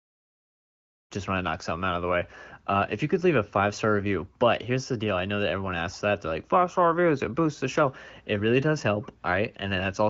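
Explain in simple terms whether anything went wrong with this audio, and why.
Nothing went wrong with this speech recording. It carries the light, faint coloring of phone-call HD Voice coding (the AMR wideband codec), and it opens with a smooth fade-in that rises from about 1 second to 1.13 seconds, the way an editor would bring the sound up.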